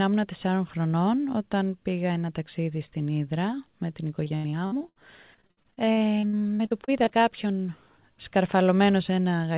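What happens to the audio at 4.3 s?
Repeated packet loss (robotic sound) runs from 4.24 s to 4.98 s, so 4.3 s falls just inside it. Over that span the sound breaks up at seven points, the longest hole about 78 ms, and each gap is patched by stretching the preceding sound forward. About 38 percent of the stretch is this filler, which gives a choppy, machine-like quality with pieces missing. It sits on narrowband audio with nothing above 4 kHz, consistent with a G.711 call path.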